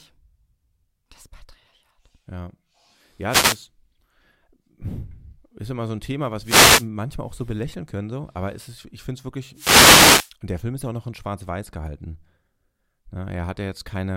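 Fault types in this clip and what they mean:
Wireless microphone noise hit: the FM radio link fades as reflections cancel, and receiver static swells over the speech in short swishes at 3.28–3.58 s, 6.41–6.88 s before "auch so belächeln können" and 9.53–10.32 s after "ist ich finde es", in bursts rather than steady hiss.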